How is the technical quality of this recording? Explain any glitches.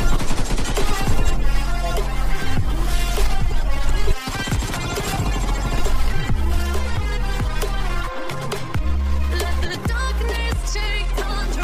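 There's one real problem here: a time-stretched section. From 3.20 s right through to the end, the sound suddenly runs about 1.35 times faster while the pitch holds steady, so it comes across rushed. That's likely software squeezing the audio to fit a length, keeping pitch by dropping short slices.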